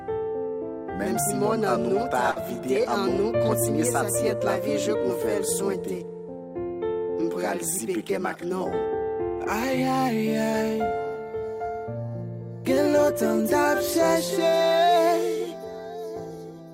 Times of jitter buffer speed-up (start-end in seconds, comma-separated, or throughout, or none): 8.10-8.51